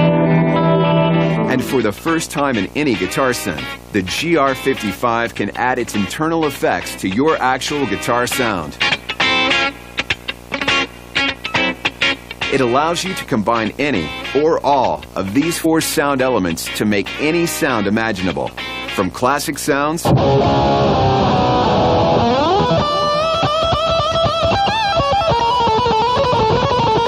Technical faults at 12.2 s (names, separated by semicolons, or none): video or display buzz